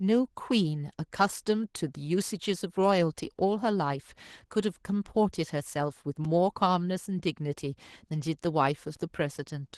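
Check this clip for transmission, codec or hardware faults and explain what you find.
Two faults are present: low-bitrate voice coding throughout the speech, and two brief dropouts to silence.

Opus voice compression runs across the whole clip. The coder is in hybrid mode, with the SILK predictive layer handling the lower band and CELT adding content above 8 kHz, but with too few bits for either. The excitation is coarsely quantised, so the speech comes out plainly muffled, hoarse and slightly robotic. That degree of damage fits a bitrate around 16 kbps.

A block of digital silence occurs at 6.25 s and again at 8.96 s, each about 5 ms long. The output samples were zeroed, most likely because the buffer wasn't filled in time. The signal drops abruptly to nothing and returns without a fade, so each gap sounds like a short tick.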